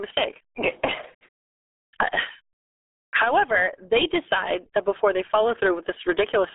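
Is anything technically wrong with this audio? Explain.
Yes. The RealAudio 14.4 codec, running through the whole clip from start to finish, squeezes the speech into a narrow band, roughly 300 Hz to 3.6 kHz, with nothing at all above 3.8 kHz. The heavy coding damage points to a very low bitrate, which fits an 8 kbit/s dial-up-era stream. The coder keeps only a coarse model of each short stretch of sound, so the speech comes out muffled and gargly.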